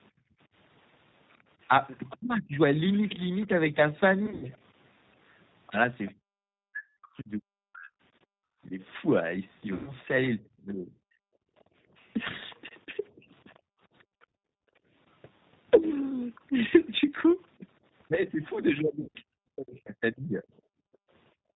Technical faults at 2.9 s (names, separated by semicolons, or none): G.729 codec; other side's voice leaking through